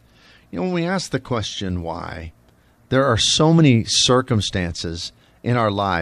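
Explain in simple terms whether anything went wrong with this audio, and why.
Nothing went wrong with this recording, as there are no technical faults to point out anywhere in it. The speech runs on without any break, glitch or damage that a listener would notice.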